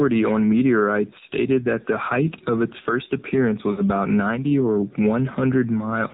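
From start to finish the speech passes through the AMR narrowband mobile codec. Nothing reaches above 4 kHz, and the voice has a plainly buzzy, synthetic edge, which fits a low mode near 7.4 kbps. Simple band-limiting would keep the voice smooth rather than making it buzzy like this.

At 2.99 s a single sharp click cuts through the sound. It is likely caused by a dropped sample: about one sample is missing, so the waveform jumps straight to a later value. The gap lasts a small fraction of a millisecond and removes no audible sound, unlike a lost frame.

From 3.72 to 3.82 s come lost AMR speech frames. The decoder stretches the last good pitch and vocal tract shape with falling gain, so for about 60 ms the voice smears and sags, which fits three lost 20 ms frames. The concealment makes a drawn-out warble, not a clean gap, and the voice comes back rough for a moment.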